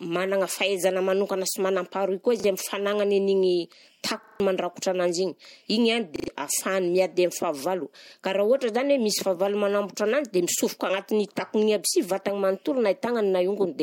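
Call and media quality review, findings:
Stutters at 2.4, 4.24 to 4.4, 6.16 to 6.28 and 8.08 s, with hard joins. Repeated buffer: playout starved, last chunk replayed, fits a 40 ms buffer.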